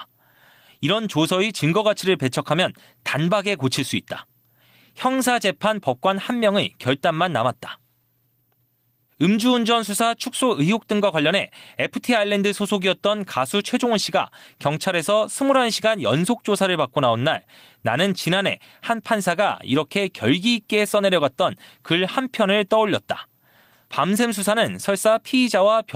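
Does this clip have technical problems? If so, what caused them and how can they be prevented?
No, there are no technical problems to report here.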